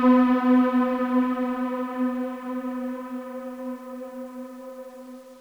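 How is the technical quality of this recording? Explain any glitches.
The technical quality is poor. A low bit depth without dither affects the whole recording. The sound is coarsely quantised, which fits rounding to about 8 bits. With no dither, the rounding error tracks the waveform instead of spreading as smooth hiss. Quiet passages turn grainy and gritty. The faintest parts sputter or drop out between steps. The distortion sits roughly 35 dB below the signal and changes with the sound. This is likely a careless bit-depth reduction.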